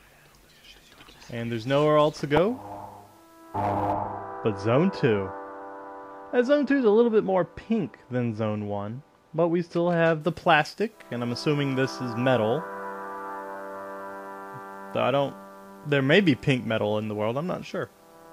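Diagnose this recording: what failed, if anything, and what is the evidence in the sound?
De-emphasis applied wrongly at the playback stage: from 3.93 to 10.21 s the sound turns dull and muffled, with the treble sloping gently down to about 13 dB below 1 kHz at 10 kHz. A treble cut meant to undo emphasis was applied where there was none, or applied twice. Its smooth tilt, without a sharp cutoff, sets it apart from codec band-limiting.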